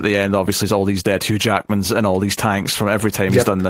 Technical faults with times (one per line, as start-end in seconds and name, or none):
none